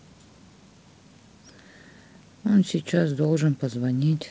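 Nothing in this speech stood out as a technical fault on listening, and it carries the light upper-band hiss and slightly noisier lower band expected of G.722 wideband telephone coding at 56 kbit/s.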